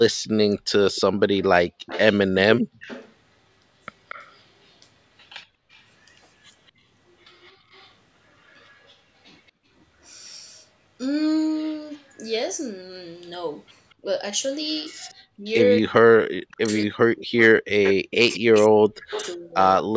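A speech recording of a call, with a delayed second copy of the voice running through much of it, heard from 0.11 to 9.51 s, briefly from 11.56 to 12.02 s and again from 13.9 to 19.83 s. This is echo leak, likely from a far-end loudspeaker whose echo canceller let part of the microphone pickup through. What separates it from room reverberation is that the copy is a distinct repeat arriving a fixed 232 ms late, not a smeared decay. It sits about 20 dB under the speech in the first stretch, is barely there at about 35 dB down in the short middle stretch, and is most prominent at about 15 dB down in the last. The room sound also ducks briefly at 2.62 to 2.8 s, falling by about 32 dB, and at 7.54 to 7.68 s by about 15 dB, each time for well under a quarter second before recovering. This is background gated by the echo canceller, which clamped the microphone while the loudspeaker was active. 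Unlike the suppression that follows, these dips hit the ambience rather than the talker. From 14.02 to 19.55 s the voice itself drops out in pieces, losing up to roughly 40 dB and about two seconds in total. This is speech suppressed in double talk, likely from the canceller turning down both voices at once when the two sides overlapped. Here the voice drops while the echo is also present, which sets it apart from the short ambience dips.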